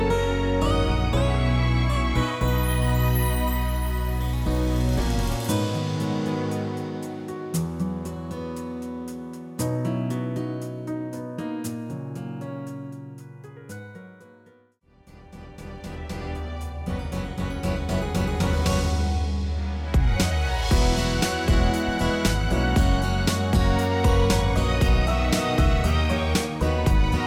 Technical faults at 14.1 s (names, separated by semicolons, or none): sample clock jitter